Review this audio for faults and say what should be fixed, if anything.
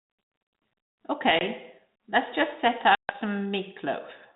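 Packet loss on an ADPCM call at 1.39 to 1.42 s (about 20 ms missing, a couple of packets) and 2.95 to 3.15 s, just after "let's just set" (about 140 ms, roughly fifteen packets): silence fills each gap, and the decoder's adaptive predictor and step size drift from the sender's, so the 32 kbit/s G.726 sound resumes slightly distorted. Adding jitter buffering, packet-loss concealment and a resynchronising decoder reset would prevent it.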